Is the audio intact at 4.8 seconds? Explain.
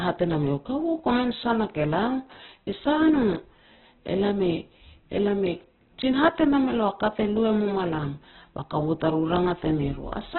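No. Throughout the speech, including at 4.8 s, there's heavy damage, likely from Opus compression at a very low bitrate, around 8 kbps. Nothing survives above 4.1 kHz, and starved bands are filled by folding lower ones or with noise, so the voice sounds rough and grainy rather than swirly like MP3 or merely dull like a plain low-pass.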